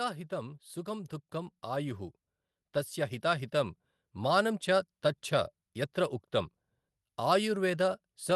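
A speech recording with automatic gain rising twice, from 0.3 to 2.07 s by about 5 dB and from 3.21 to 4.52 s by about 4 dB, with voice and background swelling together.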